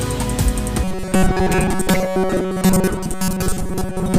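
From 0.84 s to the end, the audio turns into robotic sound from repeated short buffers. It takes on a hard, metallic buzz locked at about 188 Hz, which puts each repeated chunk at roughly 5.3 ms. Most of the sound, something like two thirds or more, is recycled rather than new. The likely cause is fresh audio arriving too slowly and the playback filling the gaps by looping its last tiny slice while the real material gets skipped.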